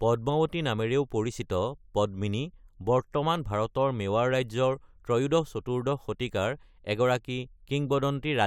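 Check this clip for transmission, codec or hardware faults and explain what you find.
Nothing faulty can be heard in this speech recording.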